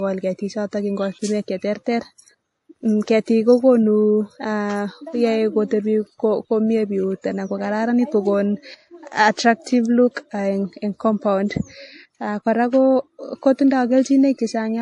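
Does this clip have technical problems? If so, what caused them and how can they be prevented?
Yes. Throughout the speech, nothing sounds above 13.9 kHz, with layered smearing typical of transcoding between lossy codecs, likely a low-bitrate MP3 re-encoded to WMA. Prevent it by encoding once from the original source.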